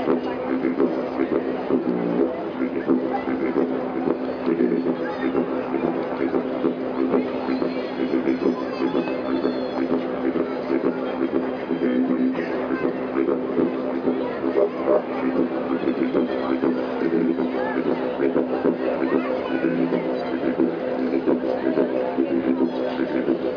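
Nothing technically wrong turns up anywhere in this audio, so there's no trouble spot to point to and no cause to chase down.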